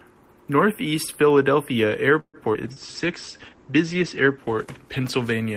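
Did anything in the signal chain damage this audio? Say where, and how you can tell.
Yes. Several stages of the call path damaged this speech, all after about 2.2 s.

Call audio freeze, network and jitter buffer stage. From 2.19 to 2.37 s the last sound carries on as a fading buzz or hiss, about 140 ms in all, ending in about 60 ms of silence. Speech then resumes where it stopped, with nothing lost. Delayed packets likely emptied the buffer.

Skip ahead, jitter buffer stage. At 2.54 to 2.57 s playback jumps forward with almost no gap. About 70 ms of speech is gone, and the two sides are butted together. That audio was dropped while later audio was already waiting.

Call bitrate drop, codec stage. From 2.64 s to the end the speech turns coarse and muffled. Top end stops near 8 kHz instead of 20 kHz. This fits the encoder falling from 32 to 12 kbps after a bandwidth estimate drop, lowest for 1.34 s.

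Short concealed packet loss, network and decoder stage. At 2.74 to 2.79 s there is a brief smear. About 40 ms never arrived. The decoder patched roughly 20 ms by extending the preceding sound, then blended back into real audio.

Jitter buffer slow-down, buffer stage. From 2.86 to 3.57 s speech drags at 87% speed with unchanged pitch. Sounds are drawn out. The receiver repeated short pitch periods, adding about 100 ms to rebuild its reserve.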